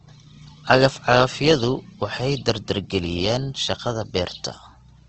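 Throughout the speech, nothing reaches above 8.2 kHz, and voiced sounds come across grainy, rough and noisy rather than hollow or swirling. The likely cause is Opus compression in its CELT mode, filling starved bands with folded or noise energy, which fits a wideband stream near 16 kbps.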